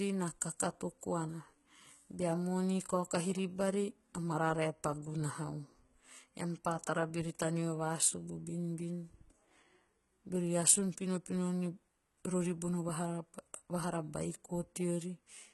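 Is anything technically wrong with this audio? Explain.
Yes. Throughout the speech there is heavy damage that likely comes from HE-AAC compression at a very low bitrate, consistent with roughly 16 kbps. Nothing is present above 11.8 kHz. Below that, the upper treble still sounds bright, but it is rebuilt by copying lower bands upward and shaping them coarsely. Its harmonics don't align with the real ones, so s sounds come out gritty and metallic rather than simply dull. That synthetic brightness is what separates it from a plain low-pass filter.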